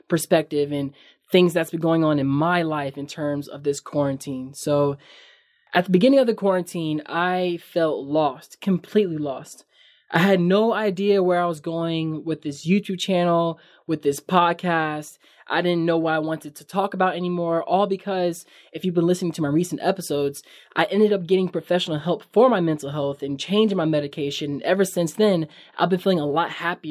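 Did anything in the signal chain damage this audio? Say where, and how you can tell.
No, nothing along the chain seems to have done any harm to this speech, so there's no stage to point a finger at.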